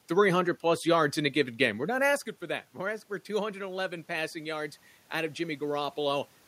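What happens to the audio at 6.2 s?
Automatic gain rising, from 2.80 to 6.26 s after "not asking for that": the level control slowly adds about 4 dB, so voice and room noise swell together.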